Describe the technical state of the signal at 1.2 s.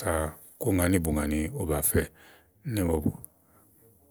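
At 1.2 s the speech signal is intact, with no audible dropout, distortion, glitch or other technical fault.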